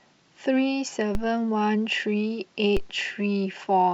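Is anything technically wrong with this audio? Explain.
Yes. There are two DC steps in this speech, at 1.15 s and 2.77 s. Each one is a low thump under the talking. At that instant the waveform's zero line jumps by about -16 dBFS, then drains away through a roughly 5 Hz high-pass, so the offset fades within a few tens of milliseconds.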